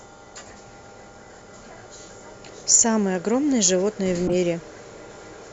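At 4.27 s the speech is interrupted by a corrupt frame decoded. It lasts until 4.34 s, about 70 ms. That span fits a run of roughly three damaged compressed frames. Flipped bits scrambled the stored gains and codes. The decoder played the frames anyway, so energy landed at the wrong frequencies. The result is a short, harsh burst, like a chirp or squeak. It peaks at a fairly loud level, around -10 dBFS.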